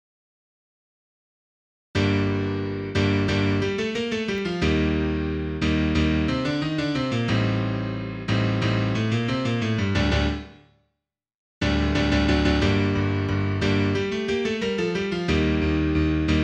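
Dropped samples at 4.38 s and again at 13.29 s: each time the waveform jumps straight to a later value, most likely because a fraction of a millisecond of the stream went missing. Nothing audible is removed; each is heard as a single sharp click.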